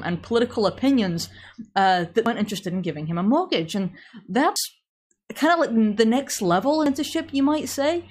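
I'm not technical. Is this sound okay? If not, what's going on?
No. The speech jumps forward at 2.26, 4.56 and 6.86 seconds, each time dropping about a fifth of a second. This is likely audio missing between chunks: the recorder saves in pieces of 2.5 seconds and loses a little at each handover.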